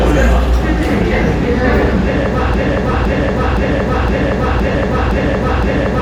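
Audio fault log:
0.92 s, 2.92 to 2.94 s and 4.72 to 4.74 s: lost LE Audio frames. Each is a tiny blurred blip: 10 ms at 0.92 s, then 20 ms at each later spot, which fits one and then two 10 ms frames dropping over the Bluetooth link. The LC3 decoder fills the hole by replaying the last spectrum with scrambled phase, so anything tonal turns briefly to a noisy smear. They're too short to fade toward silence.
2.54 s to the end: broken-record loop. From here a chunk of about 0.51 s plays back to back, exactly the same each time, seven times over until the clip ends. Whatever should have followed never arrives. The likely cause is that the player or stream stalled and kept resending the last piece it had buffered. The 20 ms glitches at 2.92 s and 4.72 s land inside this repeating stretch.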